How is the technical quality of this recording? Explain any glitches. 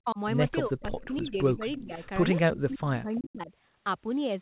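The recording has repeated call-processing glitches, and it sounds narrowband, with nothing above 4 kHz, which fits a telephone codec such as G.711.

Speech suppressed in double talk, at 0.03 to 0.18 s, 0.67 to 1.62 s, 1.78 to 2.04 s and 2.49 to 3.51 s: the speech dips or drops out in pieces, by as much as about 35 dB. The likely cause is an echo canceller that could not separate this talker from loudspeaker echo during overlapping talk and turned everything down.

Echo leak, at 0.98 to 1.2 s, 1.76 to 1.82 s and 3.15 to 3.3 s: faint copies of the speech trail it by 340 ms, about 20 to 25 dB below it. These are likely loudspeaker echo that the far side's canceller failed to remove and sent back.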